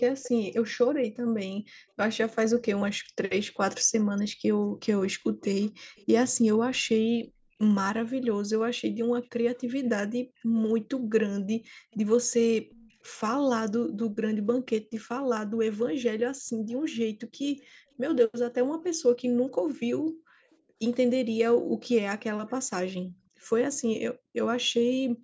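Starting at 0.23 s, then 4.16 to 6.06, 8.22 to 12.94, 17.6 and 22.48 to 23.21 s, there's a faint delayed copy of the speech, roughly 260 to 310 ms behind and quite far down in level. That's likely an echo leak from a speakerphone canceller that let some of its own playback through. The background gated by the echo canceller shows up at 4.3 to 4.74, 16.44 to 16.67 and 20.59 to 21.81 s. The room tone ducks by about 22 dB, then about 40 dB, for brief stretches before recovering.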